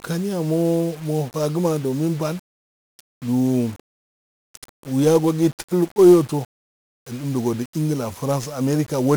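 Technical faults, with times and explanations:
Throughout: 1-bit DFPWM compression. Each sample is reduced to a single up-or-down step that nudges an adaptive level, so the speech tracks its waveform only coarsely. Heavy broadband quantisation noise results, giving a fuzzy, crackly texture with the upper frequencies submerged in hiss, consistent with roughly a 48 kbps stream.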